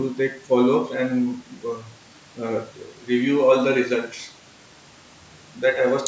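No technical faults are audible.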